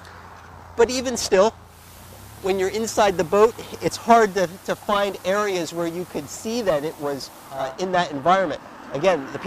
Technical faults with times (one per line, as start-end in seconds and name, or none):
1.60-7.77 digital radio blending to analogue